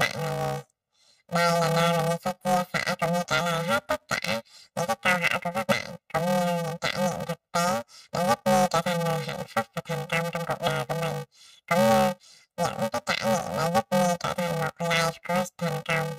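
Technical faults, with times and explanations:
Throughout: planar audio read as interleaved. Each roughly 2.9 ms block of left samples followed by right samples is read as alternating pairs, so every block plays twice at double speed. Blocks this short, fitting a 128-sample block, turn the speech into a robotic buzz at 345 Hz with no clear octave shift.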